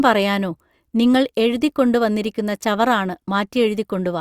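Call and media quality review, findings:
No faults found in this recording.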